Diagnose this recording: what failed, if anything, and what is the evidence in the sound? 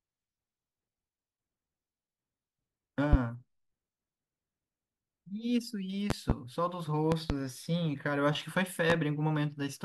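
Loud pops sit on top of the speech at 3.13 s and 8.90 s as single short impulses, and at 6.10 to 6.33 s and 7.12 to 7.33 s as pairs in quick succession, each peaking roughly 20 dB above the speech. The speech runs on unbroken beneath them, which separates these from dropouts or clipping. A step or pulse of voltage entering the chain, likely in the analogue wiring from a loose plug or connector, would produce exactly this.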